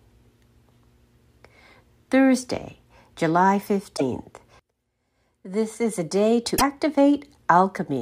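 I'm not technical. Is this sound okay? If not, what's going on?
No. There are two short spots of damaged data in a compressed stream, from 3.93 to 4.02 s and from 6.55 to 6.62 s. Each lasts under a tenth of a second. Part of the stored audio data was corrupted there, so the player misread it and had to find its place again.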